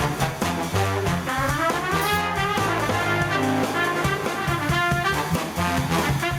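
Gain pumping runs through the whole music clip. The gain swings by around 10 dB. Loud and soft passages sit unnaturally close in level and the music sounds squashed. The likely cause is input gain set far too high for the microphone, with a fast limiter or compressor clamping down on every loud sound.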